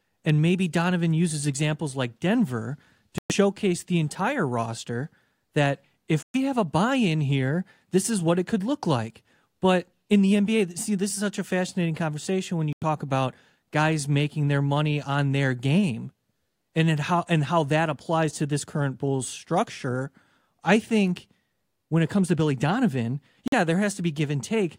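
The speech cuts to silence four times: at 3.18 to 3.32 s and 6.23 to 6.36 s (about 116 ms each), at 12.73 to 12.84 s (about 93 ms), and at 23.48 to 23.54 s (about 46 ms). Each gap opens and closes sharply, and the speech comes back further along, as though it had kept playing underneath. This is likely a Bluetooth dropout: packets reached the headphones too late and were discarded, with gap lengths that fit a handful of lost packets each time.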